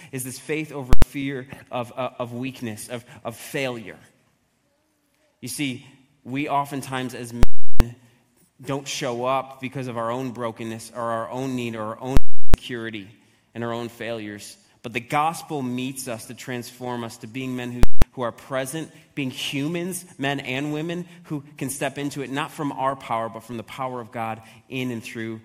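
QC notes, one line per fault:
0.93–1.02 s, 7.43–7.80 s, 12.17–12.54 s, 17.83–18.02 s: invalid numbers at full scale. Each is a loud pop at onset and release with dead silence between. A calculation produced invalid values that were pinned at maximum level for one processing block (93, 372, 372 and 186 ms), which fits blocks of 4096 to 16384 samples.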